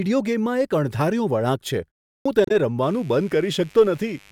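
At 2.15 s, after a pause of about 0.32 s, the speech resumes with a clipped start after a pause. The output path had dropped into an idle state during the silence and needed roughly 0.1 s to wake and lock again, so the opening sounds up to 2.26 s never reach the output. The word snaps in mid-syllable with no onset. On a waveform, the envelope jumps from flat silence straight into the speech, with no rising attack.

From 2.44 to 2.51 s there is damaged data in the compressed stream. Corrupted bytes in that stretch made the decoder misread its frames and lose sync until it found the next valid header. The result is a brief glitch in the speech.

From 2.83 s to the end, a mains buzz enters, sitting around 30 dB below the speech. Sharp switching spikes occur twice per cycle of 50 Hz mains, so the buzz repeats at 100 Hz and carries harmonics of 50 Hz well up into the kilohertz range. It sounds like a steady, raspy buzz under the speech. 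On a spectrogram it forms a comb of evenly spaced horizontal lines that continue through speech and gaps alike.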